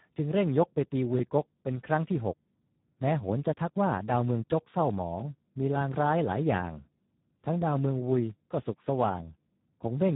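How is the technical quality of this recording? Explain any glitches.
Quality is poor throughout. Speex codec damage runs the whole clip: a CELP coder starved of excitation bits, consistent with roughly 8 kbps, makes speech hoarse and noisy, with nothing above 3.9 kHz.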